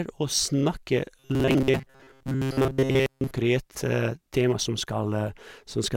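Robotic sound from repeated short buffers runs from 1.19 to 3.35 s, turning the speech into a rigid, metallic buzz at 133 Hz. The likely cause is audio arriving too seldom, so a fragment of about 7.5 ms is looped in place of most of the real signal.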